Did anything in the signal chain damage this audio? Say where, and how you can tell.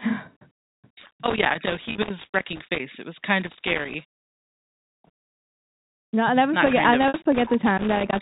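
Yes. Loose connector crackle in the analogue wiring: irregular bursts of scratchy crackle at 1.00–2.80 s, 3.41–5.21 s and 6.66–8.19 s, where an intermittent contact chops the signal.

Network packet loss with pitch repetition: a buzzy, held gap of 30 ms at 1.92 s, and a 60 ms gap at 7.08–7.14 s that fades into silence before the speech returns with a short cross-fade, where the decoder repeats the last pitch period to bridge missing data.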